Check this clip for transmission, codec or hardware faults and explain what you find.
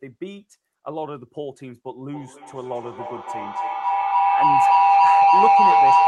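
One fault is present: a feedback howl from 2.12 s to the end of the clip. Two endpoints on the same call share a room, so the loudspeaker output re-enters the microphone with net gain each round trip. The repeats build rather than decay and narrow to a tone of roughly 700 Hz, pulsing at around 300 ms intervals, the loop delay. It peaks about 15 dB above the speech, over the call codec's roughly 12 kHz bandwidth.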